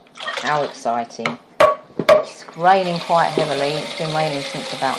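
No technical fault can be heard anywhere in the audio; the signal stays continuous and undisturbed throughout.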